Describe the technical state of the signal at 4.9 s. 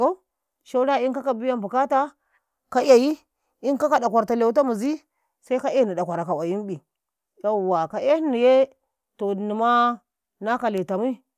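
At 4.9 s the speech signal is intact, with no audible dropout, distortion, glitch or other fault at that moment.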